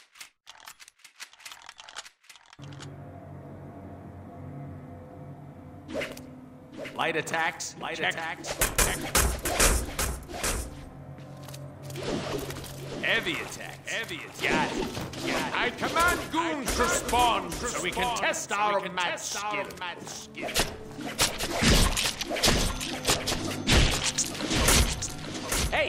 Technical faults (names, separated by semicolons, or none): doubled audio track